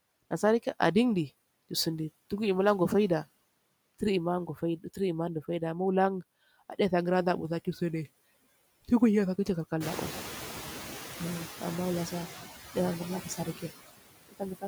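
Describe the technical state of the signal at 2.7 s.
Hard clipping occurs from 2.66 to 2.71 s, a burst of about 50 ms. For that instant the speech peaks run about 4 dB past what a stage in the chain can pass, so their tops are sliced flat. The squared-off peaks add harmonics high above the voice's natural range, heard as a brief crackle on the loudest part of the sound.

Noise suppressor artifacts also affect this moment, as they do the whole clip. The suppressor judges each frequency band frame by frame and pulls down whatever it takes for steady noise, by about 17 dB here. Around 2.7 s the background dips in the gaps and swells back under the speech.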